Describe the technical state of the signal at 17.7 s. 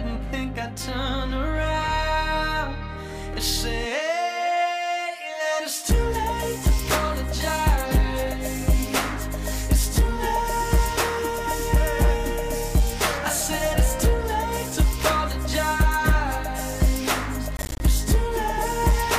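At 17.7 s you're right in the middle of a burst of processor overload crackle, running from about 17.57 to 17.81 s. The processor fell behind and missed a string of buffer deadlines, something like a dozen or more in quick succession, each leaving a short hole of silence with hard edges. The spacing of the holes points to buffers around 10 ms long. Packed together like that, the gaps come across as a gritty, tearing crackle laid over the sound, and it stops once the load clears.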